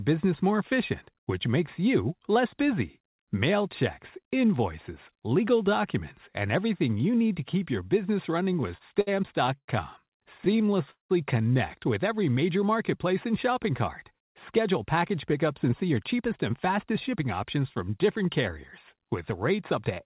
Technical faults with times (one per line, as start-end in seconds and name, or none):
8.44-9.09 repeated stalls (stutter)
9.58-9.70 call audio freeze
10.38-11.12 repeated stalls (stutter)
14.12-17.57 jitter buffer speed-up